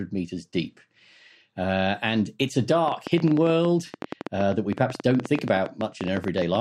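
Speech runs through the clip, and from 2.88 s to 6.56 s a train of clicks sits on top of it: roughly forty sharp ticks at about 11.4 per second, spaced unevenly, with peaks around 10 dB above the speech. The likely cause is interference or a faulty connection or power supply. Unlike dropouts or codec glitches, these pulses share one shape, keep going through pauses, and don't follow the speech.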